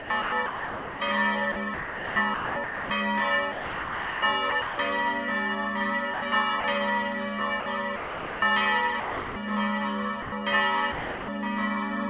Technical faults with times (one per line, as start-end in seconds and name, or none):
0.00-1.00 sound chopped by the voice detector
1.52-2.90 sound chopped by the voice detector
3.52-4.78 sound chopped by the voice detector
6.14-6.64 sound chopped by the voice detector
7.60-8.42 sound chopped by the voice detector
9.00-9.36 sound dropped by the voice detector
10.22-10.32 sound dropped by the voice detector
10.92-11.28 sound dropped by the voice detector